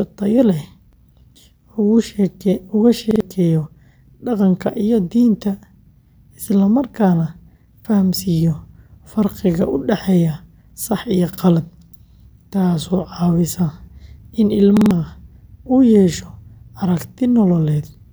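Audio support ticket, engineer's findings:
Repeated buffer, five events in speech. Stutters at 0.93 s, 3.11 s, 7.80 s, 11.33 s and 14.77 s. Each repeated piece is about 46 ms with a hard join, which fits a 2048-sample buffer. One extra play at 0.93, 7.80 and 11.33 s. Two at 3.11 s. Three at 14.77 s. New audio reached the playback device late, so it replayed its last buffer. Roughly 50 to 150 ms of new audio lost per event.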